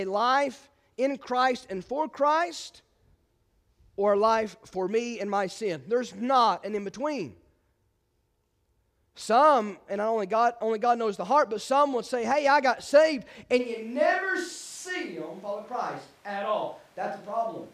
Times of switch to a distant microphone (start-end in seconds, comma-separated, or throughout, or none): 13.61-17.73